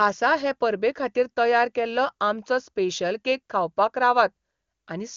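Speech over HD Voice, with no audible faults.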